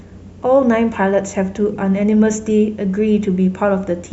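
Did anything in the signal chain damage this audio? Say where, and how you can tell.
Yes. Damaged data in a compressed stream, at the codec stage, hits the speech from 1.73 to 1.76 s as a brief 24 ms glitch. Corrupted bytes made the decoder misread the frames there, lose sync and hunt for the next valid frame header, producing garbled output. Packet loss concealment would smear or repeat the sound instead.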